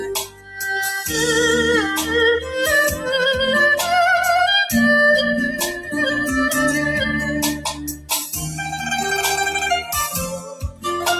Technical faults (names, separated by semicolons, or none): noise suppressor applied to music or sounds; sound cut by the noise suppressor